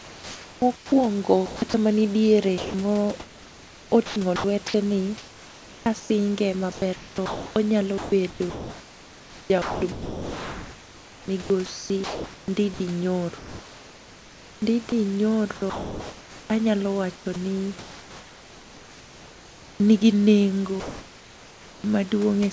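From 0 to 1.74 s, and again from 2.58 to 19.8 s, the speech is chopped by the voice detector, likely because it kept gating the sender on and off. Quiet syllables and word edges drop out into synthetic fill, about 1 s in the first stretch and about 10.4 s across the second.

Then from 20.8 to 21.84 s you get comfort noise in place of the background. The sender has likely stopped sending during the pause, and the receiver fills it with a flat, featureless hiss, about 1 dB quieter than the real room noise, which sits about 24 dB below the loud parts.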